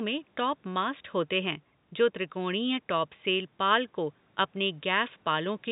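Nothing stood out on listening: the speech carries the narrow band of G.711 telephone coding, with nothing above about 3.8 kHz, and a faint room noise sits about 38 dB beneath it.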